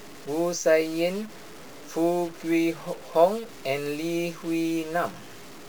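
A stuck bit runs through the whole of this speech recording, giving a harsh, buzzy distortion and a hiss that fills the pauses. The cause is likely one data bit held fixed, shifting many samples by a step of roughly -40 dBFS.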